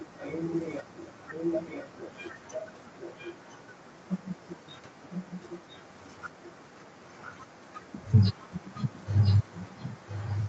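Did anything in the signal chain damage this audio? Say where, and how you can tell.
Yes. A faint copy of the speech trails by 1.0 s, about 15 dB down, throughout: likely an echo leak, the far end's echo canceller missing its loudspeaker's sound.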